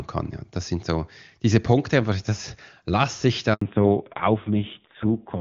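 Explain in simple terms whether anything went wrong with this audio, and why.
At 3.53 s the speech drops out completely for 80 ms, a handover gap. The phone was moving the call from one network link to another, and during that switch no speech arrived, so that short stretch is simply missing. Unlike a crackle or a stutter, nothing is repeated or garbled. The sound fades within a few hundredths of a second, stays silent, and picks up again at 3.61 s.

Right after the gap, from 3.61 s to the end, the call falls back to narrowband. Before the switch the HD Voice connection carried crisp, wideband speech. Afterwards everything above 4 kHz is gone, and the lower-quality phone codec that took over also makes the voice rougher and more muffled, like an old landline. This is not a momentary glitch. It is a lasting change in tone that begins exactly where the gap ends and never recovers.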